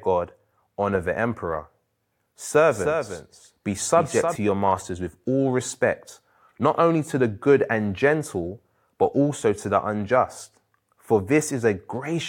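A speech recording where, likely from a second, slower capture path, a doubled audio track appears from 2.71 to 4.35 s: a flat, undecayed copy trails about 0.3 s behind, roughly 5 dB quieter, starting and stopping abruptly.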